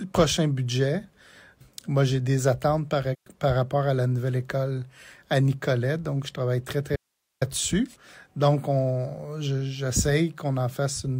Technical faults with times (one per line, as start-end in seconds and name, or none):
3.13-3.27 AAC frame loss with muting
6.96-7.41 audio dropout to a faint residue